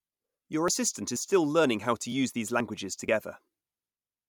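Speech jumps forward abruptly at 0.68, 1.16, 2.12 (just after "how to"), 2.60 and 3.08 s, each time losing a sliver of about 20 ms, with the surrounding sound butted together and no gap. The skips recur roughly every half second, so the likely cause is audio missing between chunks: the recorder or processor handles the signal in 0.5 s blocks and drops a little while handing over from one block to the next.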